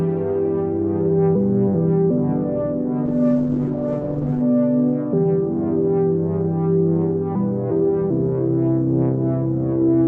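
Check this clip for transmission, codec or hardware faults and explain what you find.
One fault is present. From 3.07 to 4.49 s there is a call bitrate drop. Starved of bits, consistent with about 12 kbps, the encoder cuts content above 8 kHz. The sound turns rough and muffled.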